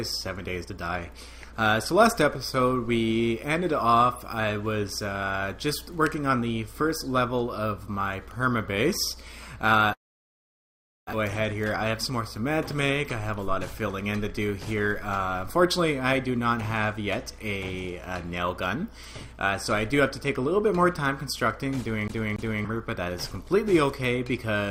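From 9.93 to 11.15 s the sound cuts out: the last bit is carried on and fades, leaving about 1.1 s of near silence, and when it resumes roughly a second of material is simply gone. That's likely a long network dropout.

Right after, from 11.43 to 13.40 s, there's a jitter buffer speed-up. The receiver is trimming tiny pitch-period slices to shed the backlog, around 150 ms in all. It runs at 106% speed, same pitch, and feels noticeably hurried.

Then at 22.08 to 22.65 s we get the classic CD stuck on one turn stutter. A 0.28 s chunk repeats twice, with a short mute at each jump back, like the laser hopping back one track on every rotation.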